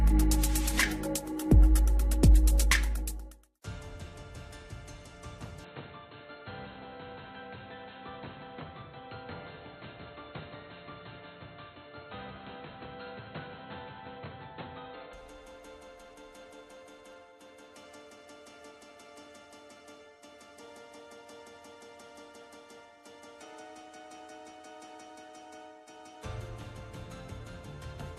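From 5.64 to 15.13 s the sound abruptly loses everything above 4.2 kHz, drops about 10 dB and gains faint hiss: likely an input switched to a poorer device, not simple filtering.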